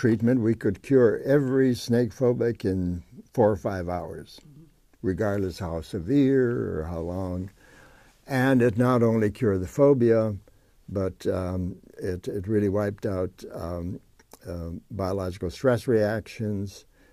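Nothing goes wrong anywhere in this one, so there's no fault to point to at any moment.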